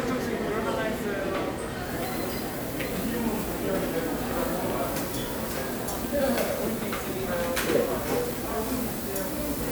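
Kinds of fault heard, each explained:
Nothing technical gets in the way here; these sounds come through just as they should, with no glitches or dropouts to point to.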